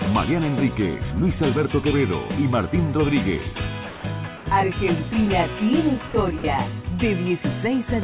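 At 3.89 to 4.04 s the sound drops out for about 150 ms and a steady, even hiss fills the gap. This is sound dropped by the voice detector: the sender likely judged that stretch to be background and stopped transmitting, and the receiver played comfort noise in its place. On the waveform the envelope collapses to a flat, low band. On the spectrogram the detailed content is replaced by a uniform smear of noise that ends cleanly when the sound returns.

From 4.37 to 4.46 s, comfort noise replaces the background. For about 90 ms the real background, which sits about 19 dB below the loud parts, is swapped for featureless synthetic noise about 2 dB quieter. This is likely discontinuous transmission, with the receiver filling the pause itself. The spectrogram shows a smooth, textureless patch within the 4 kHz band the call path passes, and the waveform shows a slight dip in level.

The same voice-detector dropout returns twice more, for 60 ms each, at 6.08 to 6.14 s and again at 6.38 to 6.44 s. 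Each time, the sound is briefly cut and replaced by steady noise, again likely because the detector mistook it for background. Both gaps show as short, flat-topped blocks of uniform noise on the spectrogram, with abrupt edges on either side in the waveform.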